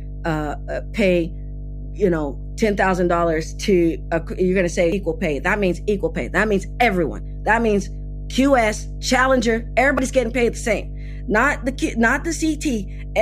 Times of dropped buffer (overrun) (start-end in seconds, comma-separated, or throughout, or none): 4.92, 9.98